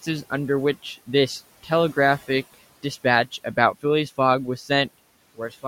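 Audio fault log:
4.88 to 5.68 s, one channel drops out: the speech suddenly falls by about 6 dB until the end, likely because one stereo channel vanished before the mono sum.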